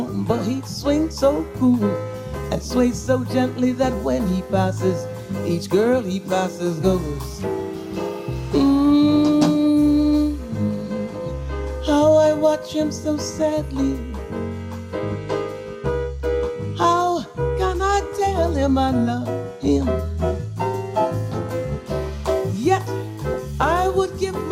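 Weak DAB reception let bit errors slip past error correction into the audio data, leaving DAB burbling from 23.31 to 23.36 s: a brief burst of burbling across what sounds like several corrupted frames.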